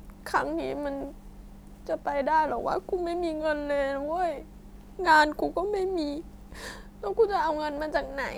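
Nothing here points to a technical fault; the speech runs along with no dropouts, glitches or other trouble to flag.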